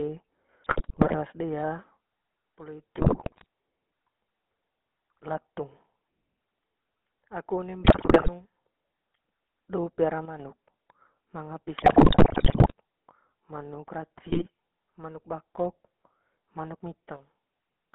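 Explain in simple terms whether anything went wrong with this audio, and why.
The whole recording went through the GSM full-rate codec, an early mobile phone speech coder. It rebuilds the voice from a rough model driven by buzzing pulses. Nothing above about 3.4 kHz survives, so the speech sounds plainly buzzy, gravelly and muffled.

There are also GSM bit errors. A weak radio link corrupted the coded data. The decoder then rebuilt badly distorted sounds, heard as squawks, pops and gargling. This happens from 0.64 to 1.15 s, from 2.98 to 3.46 s, from 7.84 to 8.29 s just after "aku one", from 11.78 to 12.72 s where it is worst, and from 14.17 to 14.47 s just before "manuk bakok".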